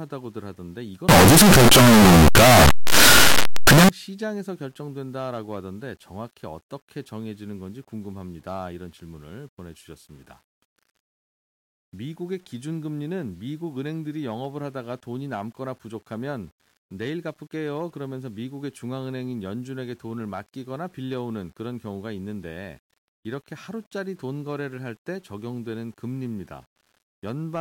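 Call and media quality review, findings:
Harsh, very loud distortion on the speech, 1.09 to 3.89 s. Quiet stretches come out as loud as the rest. Likely signed and unsigned mixed up on the 8-bit samples. The top bit flips, so each zero crossing jumps across the full range.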